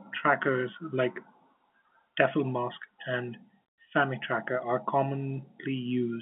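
No technical faults are audible.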